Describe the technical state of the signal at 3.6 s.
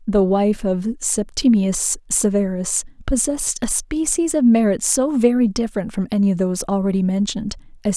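At 3.6 s the speech signal is intact, with no audible technical fault at that point.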